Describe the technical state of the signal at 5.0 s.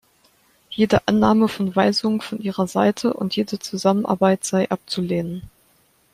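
At 5.0 s the audio is intact, with no audible fault at that moment.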